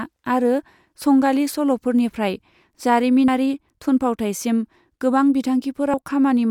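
At 3.28 s, just before "थुनफावथाइसिम गोबां", and again at 5.94 s, compressed frames get skipped. The speech jumps ahead roughly 70 ms, which fits about two lost 32 ms frames.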